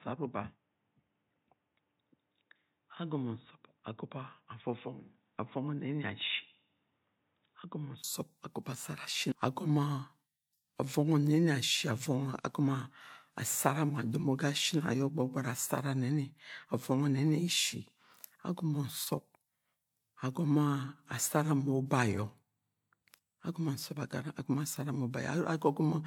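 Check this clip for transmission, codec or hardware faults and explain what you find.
One fault is present. From 0 to 8.04 s the speech sounds dull and boxy, with nothing above 3.8 kHz. The level is about 5 dB lower, and there is a separate background noise roughly 45 dB below the signal. A 20 ms silence then comes before "agomo asara shin", where the sound clears. The likely cause is an input switched to a poorer device, either another microphone or a headset's call profile, whose narrower band and own noise shaped that opening stretch.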